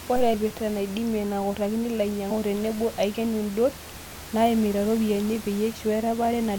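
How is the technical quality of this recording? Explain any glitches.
The speech is marred by three short glitches from damaged data in a compressed stream, at 0.33 s, 2.30 to 2.32 s and 5.71 to 5.73 s. Each is a brief chirp or blip. Corrupted bytes made the decoder misread frames, lose sync and jump ahead to the next valid frame header. Room noise sits about 16 dB below the speech.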